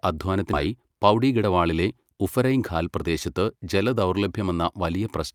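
A speech clip with two timing faults. The first is a skip ahead, between 0.53 and 0.68 s. About 400 ms of speech is gone. Playback jumps straight from one side of the gap to the other, with no silence or fill between them. The listener loses a chunk of what was said, and the join sounds abrupt. This happens when audio is dropped in transit, or when an overfull jitter buffer discards it, while later audio is already queued. The second is a jitter buffer speed-up, from 1.14 to 1.50 s. Here the speech runs at about 113% of normal speed. The pitch stays the same, so it sounds hurried rather than higher. The receiver was holding more delay than it wanted. It cut out many tiny slices of a pitch period or so, roughly 50 ms in all, to catch up.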